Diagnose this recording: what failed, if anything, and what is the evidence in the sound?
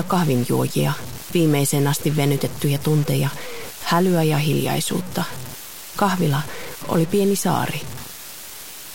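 The likely failure is at the sample-format conversion stage: the audio was reduced to about 5 bits by plain truncation with no dither, leaving low bit depth without dither across the whole clip. The sound is grainy and harsh from start to finish, with the quantisation error sitting only about 15 dB below the signal. Because that error tracks the waveform rather than forming a steady hiss, the grit shifts with the sound, and quiet passages break up into sputtering steps or drop out.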